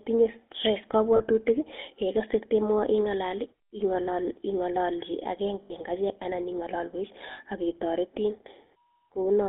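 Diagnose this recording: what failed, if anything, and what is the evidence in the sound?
The codec stage failed, throughout the speech: a buzzy, gravelly roughness typical of the GSM full-rate codec, its sound fitting about 13 kbps, over a line band of 150 Hz to 3.5 kHz. Unlike plain band-limiting, the grain comes from coarse pulse-driven excitation, not only missing highs.

The network dropped audio as lost GSM frames: brief rough, metallic holds at 1.16 s (40 ms), 5.62 s (80 ms, just before "en achek anan ing'alalwek") and 7.32 s (60 ms, just after it). Repeating the last frame's settings causes the ring, unlike clean dropout silences.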